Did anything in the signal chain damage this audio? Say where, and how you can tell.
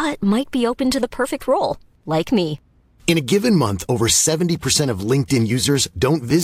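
No, nothing along the way from capture to playback left a mark on this speech that a careful listen can pick up, so there's no stage to point at.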